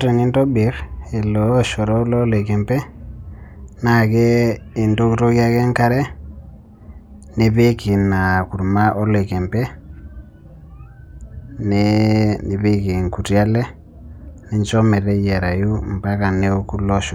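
Nothing in the speech recording stood out as a technical fault on listening.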